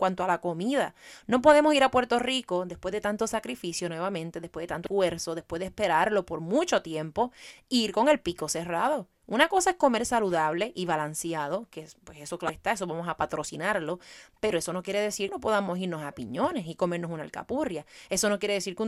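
Damaged data in a compressed stream produces four brief glitches in this speech: 4.84–4.87 s after "sacrificio nuevamente después de", 7.47–7.51 s, 12.46–12.50 s, and 15.26–15.29 s before "no podamos irnos a". At each point, corrupted bytes throw the decoder out of frame sync, and it jumps ahead to the next header. Unlike a plain dropout's silent gap, each one comes from the decoder losing and then regaining sync.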